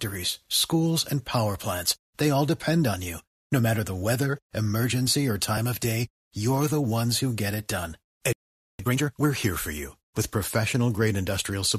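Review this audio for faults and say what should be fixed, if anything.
At 5.58 s, just after "the weather emergency or", the time stamps of two stream segments overlap. The segments appear to run about 6 s each, and the player trims the duplicated span even though that audio was never actually repeated. A sliver of the speech, well under a tenth of a second, is lost, and the waveform jumps across the gap, producing a tiny click or skip before "of day you're the". To prevent this overlap between stream segments, the packager should stamp each segment so that it begins exactly where the previous one ends.

From 8.33 to 8.79 s, right after "who get it done", the player most likely ran out of buffered data or had its playback thread blocked. The output drops to silence for about 464 ms, a clear gap in the middle of the flow. To prevent this playback stall, keep a deeper playback buffer and make sure the audio thread is never held up by other work.

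From 8.79 to 9.25 s the player works off the backlog left by the stall, cutting out small pieces of audio and cross-fading the joins. The speech runs at twice normal speed but keeps its normal pitch, so it sounds rushed until it settles back to normal pace at "here for you with". To prevent this time-compressed catch-up, avoid the stall in the first place, or catch up more gently at a speed closer to normal.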